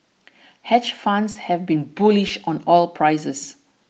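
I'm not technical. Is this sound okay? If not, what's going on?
No. At 1.31 s and 2.27 s there's short concealed packet loss: bits of speech went missing and were patched over, so they sound smeared or wobbly rather than going silent.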